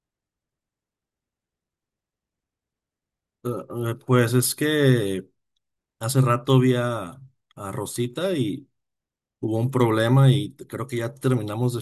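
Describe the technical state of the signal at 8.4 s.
At 8.4 s the speech signal is intact, with no fault present at that moment.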